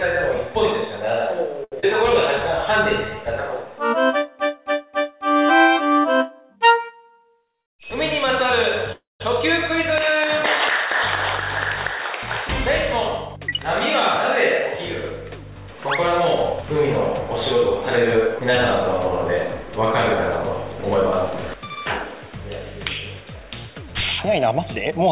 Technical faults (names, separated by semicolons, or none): short stall from a late packet; short concealed packet loss; call audio freeze; jitter buffer speed-up